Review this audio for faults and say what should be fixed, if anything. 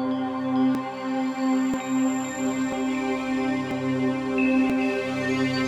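Short skips occur at 0.75, 1.74, 2.72, 3.71 and 4.70 s, about once a second, each losing roughly 15 ms with the two sides joined directly. This is likely audio missing between chunks of about 1 s. A waveform shows an abrupt jump at each join, and a spectrogram shows a thin vertical line. To prevent it, record with continuous double buffering so that no audio is dropped while one chunk closes and the next opens.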